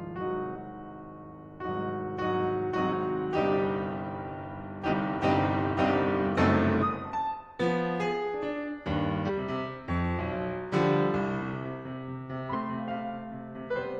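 The music lurches forward at 0.51, 2.88, 4.88, 6.78, 9.25 and 12.50 s, losing roughly a tenth to a fifth of a second each time. These are compressed frames skipped: whole frames went undecoded, and the jumps fit multiples of a 46.4 ms frame.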